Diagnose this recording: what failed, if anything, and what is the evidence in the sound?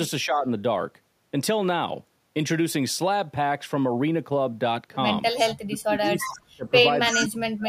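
Speech suppressed in double talk, in call processing. The speech dips about 10 dB at 0.25–0.46 s. It drops by about 40 dB at 5.64–6.66 s, and again from 7.11 s to the end. The echo canceller likely saw both sides at once and turned the talker down.

Echo leak, also in call processing. A delayed copy of the speech, 332 ms late, appears at 5.38–5.54 s, 6.19–6.33 s and 7.11–7.25 s. It rises from about 20 dB below the speech to roughly equal level. A loudspeaker's echo likely passed the canceller uncancelled.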